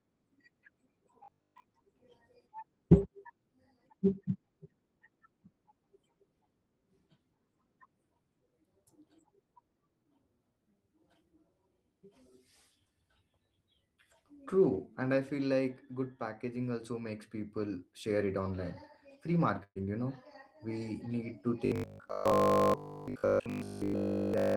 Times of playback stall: none

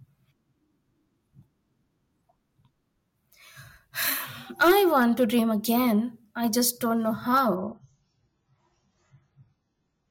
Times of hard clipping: 4.62-5.36, 6.67-6.69, 7.34-7.40

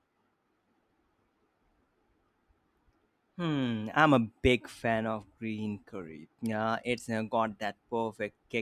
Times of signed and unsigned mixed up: none

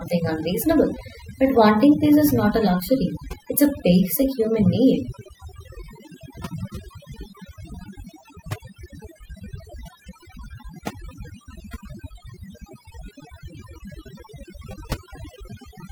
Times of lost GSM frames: none

